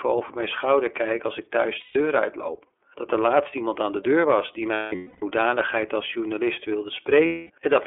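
The whole thing runs through the iLBC codec, band-limited to about 300 Hz to 3.4 kHz, with plainly audible roughness and a synthetic edge that fits its 30 ms frame mode. Lost iLBC frames show up at 1.8–1.96 s, 4.73–5.23 s (scattered, longest stretch around a third of a second) and 7.26–7.5 s. Each gap becomes a held, buzzy vowel, then the speech recovers almost immediately.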